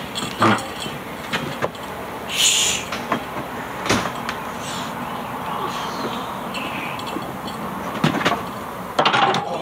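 Gain pumping runs through the whole clip. The gain is pulled down each time a loud sound arrives, swinging by around 15 dB. The likely cause is input gain set far too high for the microphone, with a fast limiter or compressor clamping down on each peak and releasing afterwards. Loud and quiet passages end up close in level, and the sound comes across as squashed and breathing.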